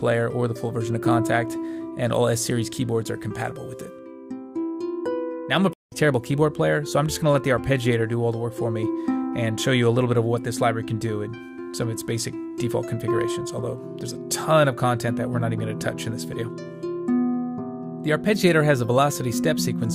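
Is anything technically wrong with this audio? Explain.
Yes. At 5.73 to 5.97 s there is a stream reconnect: the connection dropped and the player restarted a fresh decoder mid-stream. The sound cuts out for about 184 ms, then resumes roughly 150 ms further on, so a short stretch of audio is skipped.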